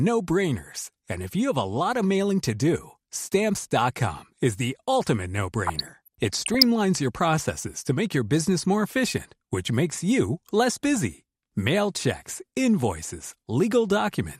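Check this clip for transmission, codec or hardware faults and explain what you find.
Two faults are present: coding damage across the whole speech clip, and a burst of reception errors in the middle.

MP2 compression is the likely cause of the damage heard throughout. The coder seems starved of bits, consistent with a rate around 80 kbps, so upper sub-bands drop out and the remaining ones are coarsely quantised. The speech sounds dull, with a gurgling, granular edge that flickers as bands switch on and off.

DAB burbling runs from 5.66 to 6.63 s, between "is the ultimate" and "your processes to make". Bit errors at a rate of around 0.4 percent slipped past error correction and corrupted sample values across many consecutive frames. Short blips of noise land in single sub-bands, producing burbling over the speech.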